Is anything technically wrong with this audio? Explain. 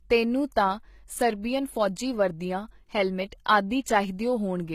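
Yes, there are two problems. Throughout the speech, the treble sounds synthetic: s sounds come out gritty and lispy, with a metallic sheen, and nothing is present above about 14.9 kHz. The likely cause is HE-AAC compression at a low bitrate, consistent with roughly 20 kbps. That codec encodes only the lower spectrum and fills the top by copying lower bands upward under a coarse envelope, so the high harmonics no longer match the real voice.

At 3.45 s, a sharp attack is preceded by a brief wash of hiss, and the onset itself sounds softened and smeared. This is pre-echo. The transform codec spreads quantisation noise across its whole block, so noise sized for the loud attack also fills the quiet moment just before it, here about 15 ms ahead of the transient.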